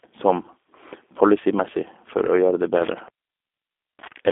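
G.729 codec damage runs throughout the speech, a plainly audible roughness typical of an 8 kbit/s codec. Each 10 ms frame is rebuilt from a vocal tract filter, a pitch predictor and a few pulses, so the speech sounds slightly synthetic. The line band is about 250 Hz to 3.6 kHz, with nothing above 3.8 kHz.

An intermittent contact starts at 2.75 s and lasts until the clip ends at 4.32 s. A loose cable or plug opens the connection for about 0.91 s. The speech drops out or breaks up with crackle at the edges, leaving faint hiss while the line is open.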